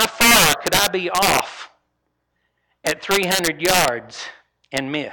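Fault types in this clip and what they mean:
integer overflow: Gain pushed samples past the largest integer, about 1 to 2 dB over, and they wrapped to the opposite sign instead of limiting. Loud speech peaks become violent cracks, harsher than clipping, from 0.00 to 1.40 s, 2.87 to 3.88 s, and once at 4.77 s.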